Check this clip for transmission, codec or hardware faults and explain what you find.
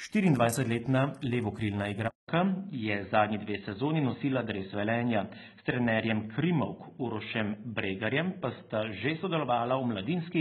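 Two faults stand out: coding damage across the whole clip, and a drop in quality partway through that lasts to the end.

From the start, sibilants sound gritty and metallic, and the treble has a synthetic brightness that stops at 11.8 kHz. This is likely HE-AAC compression. Spectral band replication rebuilds the upper band from lower harmonics, and the heavy damage fits a bitrate near 16 kbps.

At 2.08 s a silence of about 200 ms is followed by speech that sounds dull and boxy, with nothing above 4 kHz and a faint new noise floor, though the level holds steady. The likely cause is an input switched to a poorer device, whose narrow band and own noise take over from there.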